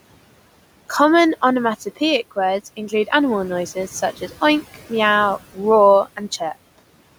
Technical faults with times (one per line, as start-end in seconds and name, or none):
0.00-7.18 noise suppressor artifacts
2.77-3.12 speech cut by the noise suppressor